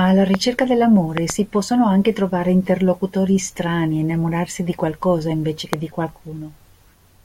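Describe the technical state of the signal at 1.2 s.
At 1.2 s the signal carries a loud pop, spanning 1.18 to 1.32 s: two sharp thumps in quick succession, peaking well above the speech level while the speech continues underneath. The likely cause is a sudden voltage step, from a plug, switch, static discharge or driver glitch, shaped by the downstream circuitry.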